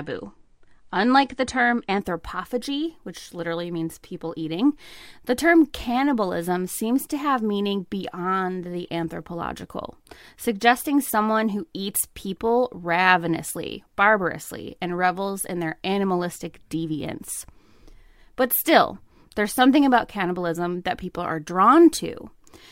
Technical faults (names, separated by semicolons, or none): adaptive stream starting at a low bitrate